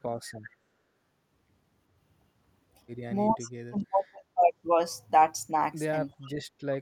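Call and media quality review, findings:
Echo leak at 3.33–3.50 s and 6.22–6.30 s: faint delayed copy of the talker trailing by 384 ms, about 25 then 30 dB under the speech. Likely the far-end speakerphone's echo canceller letting residual loudspeaker pickup back through.

Speech suppressed in double talk at 3.35–3.39 s (shallow dip, about 5 dB), 3.68–4.53 s (roughly half a second affected, down about 25 dB) and 6.15–6.45 s (near dropout, about 35 dB). Likely the echo canceller ducking both its own talker and the loudspeaker echo while both sides overlap.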